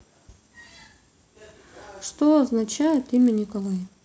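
From 2.58 s to the end, a resampler restarted on every block. Each 20 ms block was converted from 48 kHz to 16 kHz alone. Its edges lacked the real neighbouring samples. Small edge errors repeat at 50 Hz, heard as a buzz over the speech.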